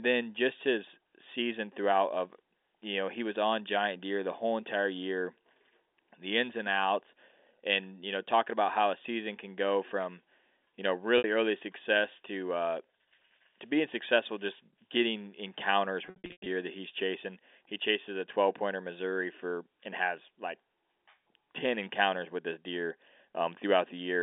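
At 11.18 s, after "go from you know", 60 ms of packets drop out and are bridged by pitch repetition, giving a brief held buzz before "early success to uh". From 16.06 to 16.46 s, after "successful just getting encounters", 300 ms of losses scatter over 400 ms. Runs up to 100 ms outlast the fade of about 50 ms, so the repeated period dies into silence before "that he's chasing".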